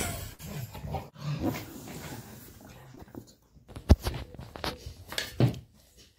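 A burst of packet loss runs from 0.33 to 0.41 s. Several consecutive packets never arrived in time to be played, so the receiver extended the last sound it had for about 56 ms, letting it fade as the gap went on, which gives a brief smeared, held quality rather than silence. When playback picks up again the sound has jumped ahead, with roughly 60 ms of the original audio simply missing.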